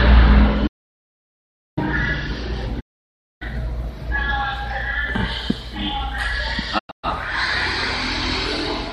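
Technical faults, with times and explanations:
0.68–1.77 s, audio dropout to silence: the sound cuts off abruptly and returns after about 1.1 s, with the gap silent and no room tone left. The input was likely lost while recording continued, so the gap has hard edges rather than a fade.
2.79–3.43 s, digital broadcast dropout: a single 0.6 s mute where the receiver discarded corrupted frames. Unlike the earlier cut, it fades out and back over about 20 ms, and the length fits a run of roughly 24 ms frames.
6.77–7.05 s, digital broadcast dropout: several short holes spread over 240 ms, totalling about 216 ms of lost sound, with the longest single gap 120 ms. Each hole is faded over about 20 ms as the receiver muted intermittently failing frames.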